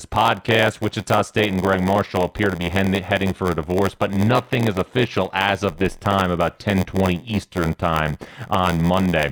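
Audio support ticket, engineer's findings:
Block size mismatch (padded), whole clip. Steady 86.1 Hz buzz; playback slowed to 0.938x, pitch unchanged. Buffer handoff: writer's short blocks zero-filled to reader's size, which fits a 512-sample read. Unlike sample-rate mismatch, pitch holds.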